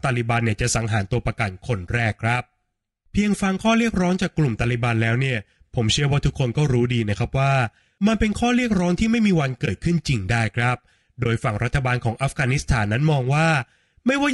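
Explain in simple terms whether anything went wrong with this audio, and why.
Two things went wrong. The whole recording has a rough, grainy quality, with a hiss caught between the tones of the voice and a thin, artificial sheen on the highest sounds. That points to low-delay AAC compression, likely the AAC-ELD kind used for video calls. It chops the speech into very short slices to keep delay down, and at this quality setting there are too few bits to reproduce the voice cleanly.

There are also two brief dropouts, at 9.65 to 9.68 s and again at 11.23 to 11.26 s. Each is AAC frame loss with muting: one short chunk of the stream, about 20 ms, never arrived, and the decoder filled it with silence. The sound fades out and back in over that span, so you hear a brief dip in the speech.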